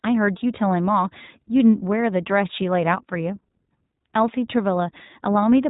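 From start to finish the speech sounds muffled and plainly rough and synthetic, with nothing above about 3.8 kHz. This is iLBC codec damage: each short frame is coded independently, a pattern fitting 20 ms frames at roughly 15 kbps.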